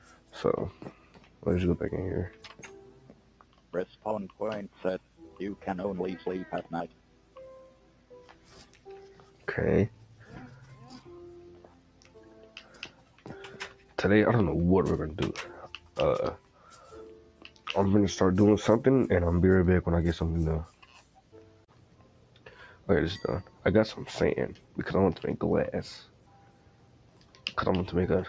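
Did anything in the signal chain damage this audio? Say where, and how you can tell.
Yes. Throughout, the level pumps and sustained sound thins, swinging about 10 dB: a noise suppressor in the call processing stage, built for speech, is treating steady material as noise.

That noise suppressor cut sound, each time by about 7 dB at its deepest, at 0–1.45, 2.89–5.2, 6.89–10.23, 11.61–13.98, 15.75–17.66, 20.69–23.64, 24.56–24.76 and 26.05–27.49 s.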